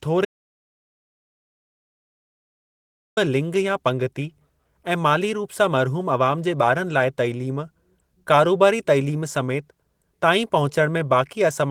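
At 0.25 s the speech cuts out into dead silence with no room tone, returning only at 3.17 s on "लिंग या", so about 2.9 s is missing. This audio dropout to silence likely comes from the input being lost while the recorder kept writing silence.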